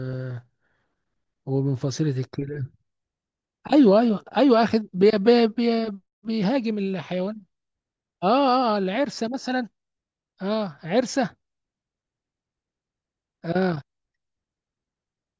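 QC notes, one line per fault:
No faults heard anywhere in this speech recording.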